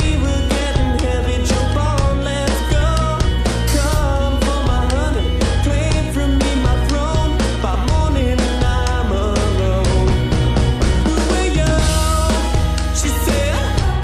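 Mains hum runs from start to finish: a steady 60 Hz tone with low harmonics, sitting at roughly the same level as the sound itself. A ground loop or nearby transformer is feeding power-line current into the signal; its fixed, unwavering pitch separates it from irregular low-frequency rumble.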